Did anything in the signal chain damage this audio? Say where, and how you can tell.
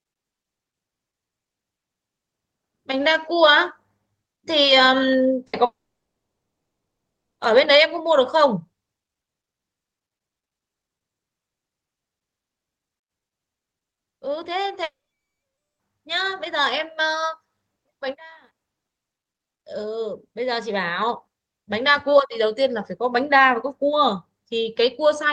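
Yes, the network stage. A burst of packet loss at 5.47 to 5.56 s: about 60 ms of audio never arrived, so the receiver stretched the preceding sound into a brief fading buzz or hiss, then resumed with that 60 ms missing.

Long network dropouts are the likely cause of gaps from 5.65 to 7.42 s and 14.83 to 15.82 s. Each begins with a short concealed tail, then falls to silence, for about 1.67 s and 0.89 s respectively, and the audio resumes having lost 1.74 s and 0.96 s.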